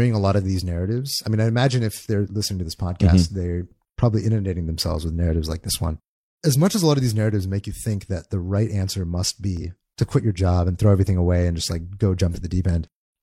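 Speech, with two short bursts of damaged data in a compressed stream. The first runs from 9.57 to 9.62 s, between "the right answer must" and "to quit your job". The second runs from 12.31 to 12.37 s, just after "and just like go". Each lasts about 55 to 60 ms and is heard as a brief chirp, squawk, click or short hole. Corrupted bytes made the decoder misread those frames and lose sync until it found the next valid frame header.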